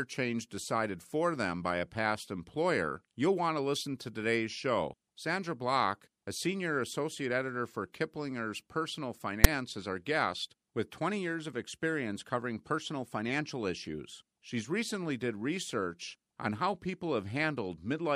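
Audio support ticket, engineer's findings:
Loud rasp at 9.44 s, hard-edged, a few milliseconds long, just before "is our guest with". File tags played as audio. Text metadata inside the stream decoded as samples. Character bytes give a harsh burst pushed to one side. Component: container parser or demuxer.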